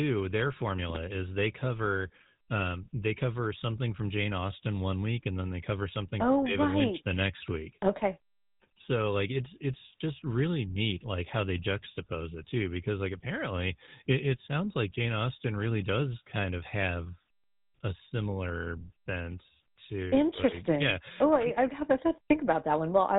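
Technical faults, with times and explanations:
Throughout, GSM full-rate codec: the speech stops dead at 3.8 kHz and carries a plainly audible buzzy, gravelly roughness, because it is rebuilt from a vocal-tract model driven by a thin train of evenly spaced pulses, which fits 13 kbps GSM full rate.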